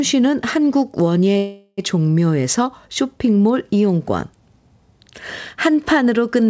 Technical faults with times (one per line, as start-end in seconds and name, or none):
1.38-1.79 call audio freeze